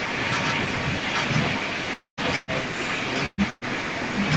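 From the start of the clip to its end at about 4.4 s, a second copy of the speech runs underneath the main signal, trailing it by about 0.83 s and sitting only a few decibels below it. This is an echo leak. The likely cause is a far end on loudspeaker whose echo canceller failed to subtract what its microphone picked up, so that residue was sent back. The delayed copy comes back in scraps or longer stretches, often chopped, thin or distorted.

Between 1.93 s and 2.20 s there is a long network dropout, likely caused by a stretch in which no packets arrived. The receiver extends the last sound as a buzz or hiss that decays over roughly the first tenth of a second, then goes silent for about 0.12 s. Speech resumes with about 0.24 s of material missing, so the sound jumps forward rather than picking up where it broke off.

Three shorter bursts of packet loss follow, at 2.36 to 2.51 s, 3.26 to 3.41 s and 3.50 to 3.64 s. 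Each removes about 120 ms. The decoder papers over each gap with concealment, which sounds like a held, fading buzz or hiss. The second and third bursts end in brief silences of about 20 ms and 10 ms before the signal resumes, with the intervening portion lost.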